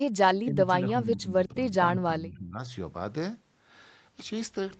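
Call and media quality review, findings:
Speech level dips at 0.17–0.74 s, 1.01–1.77 s and 1.94–2.62 s: about 15 dB deep in the first two, about 25 dB in the third. Likely speech suppressed in double talk: the echo canceller mistook the near-end talker for loudspeaker echo and attenuated it.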